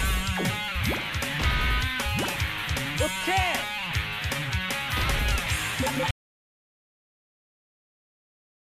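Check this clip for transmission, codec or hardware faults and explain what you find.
One fault is present. At 6.11 s there is an audio dropout to silence. The input was likely lost while recording continued. The sound cuts off abruptly, leaving 2.5 s of silence with no room tone through to the end.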